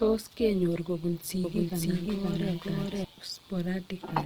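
A short speech recording, likely passed through Opus compression in its music (CELT) mode at a rate that fits about 24 kbps, with bands filled by folding or noise, so the voice sounds rough and grainy throughout, though at full bandwidth. Frames were rejoined with an overlap that doesn't sum evenly, producing overlap-add ripple: the level pulses by about 6 dB at around 150 Hz, heard as a metallic buzz with extra tones around each note. From 1.44 s to 3.04 s a doubled audio track appears, likely a second capture path running late, so a copy about as loud as the original trails it by roughly half a second, starting and stopping abruptly with no room colour.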